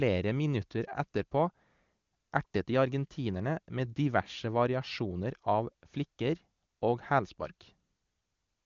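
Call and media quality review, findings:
No faults found.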